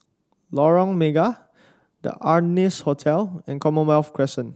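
No technical faults can be heard anywhere in the speech. It has come through a call path whose codec caps the high end at about 8 kHz, a band limit that fits Opus running at a moderate call bitrate.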